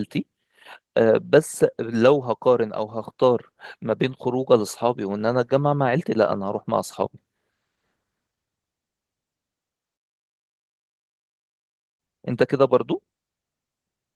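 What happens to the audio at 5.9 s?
At 5.9 s the speech carries on intact, with no dropout, click or other fault, only the light softening of its Opus voice compression at about 20 kbps.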